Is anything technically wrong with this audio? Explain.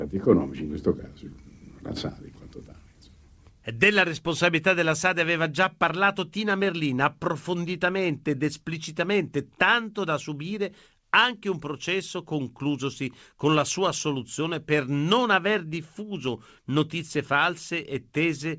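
No, nothing in this speech clip points to a technical fault. It has passed through a call connection whose sound has nothing above 8 kHz, which fits a wideband codec such as G.722.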